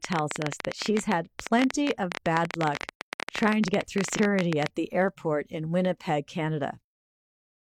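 Something near the signal chain, most likely interference from nearby equipment or a faulty connection or power supply, keeps injecting short pulses from 0.05 s to 4.67 s. The result is a train of clicks, about 14.7 per second at an uneven pace, with around seventy in total. Each pulse has much the same sharp shape and peaks about 20 dB above the speech, so the ticking sits clearly on top of the talking and carries on through the pauses.

Between 4.14 s and 4.19 s, while the clicks are still running, the decoder drops compressed frames, either because they are missing or because it rejects them as damaged. The speech jumps forward by roughly 150 ms, which fits about three frames of 46.4 ms each, so the sound lurches ahead where the frames are left out.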